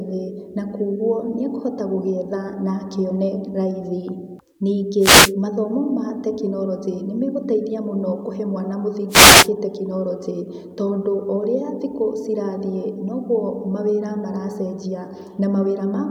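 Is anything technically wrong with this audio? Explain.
Yes. The speech has two wireless microphone noise hits. The first runs from 4.99 to 5.33 s, just before "mathomo ma tekinoronjĩ nĩmegũteithia". The second runs from 9.09 to 9.49 s, right after "nĩmegũteithia mũno kũhe mwana". They last about 0.3 and 0.4 s. The analogue FM radio link faded as reflected signals cancelled the direct one. Receiver noise then rose over the voice. Each hit is heard as a brief swish of static.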